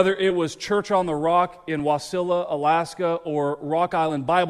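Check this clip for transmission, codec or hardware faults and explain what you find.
Two brief skips from compressed frames skipped, at 0.30 s and 4.09 s. Whole 10 ms frames never reached playback. The audio lurches forward about 10 ms, then about 20 ms.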